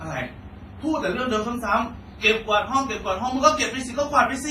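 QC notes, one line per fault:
Throughout: transcoding between lossy codecs, likely a chain consistent with WMA at 24 kbit/s re-encoded to Vorbis at 58 kbit/s. Smeared, warbly artefacts from both encoders are heard layered together. The spectrogram shows blotchy, holed high bands and a flat ceiling, empty above 15.4 kHz.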